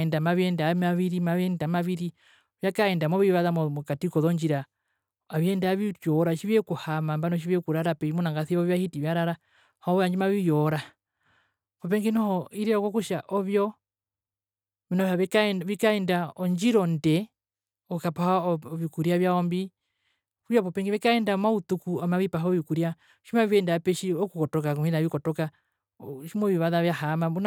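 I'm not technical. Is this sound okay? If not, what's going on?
Yes, this sound is fine.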